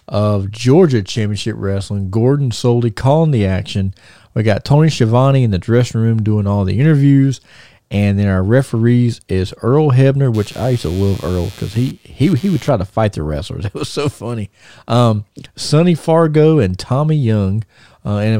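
From 10.34 to 12.69 s the speech carries computer activity noise: a buzzing, chirping texture pulsing at around 100 times a second, sitting roughly 25 dB below the speech. Shifting processor or graphics load disturbs the ground shared with the audio circuit, which injects this interference. Unlike steady mains hum, it doesn't persist through the clip. It switches on and off with the machine's workload, regardless of what the speech is doing.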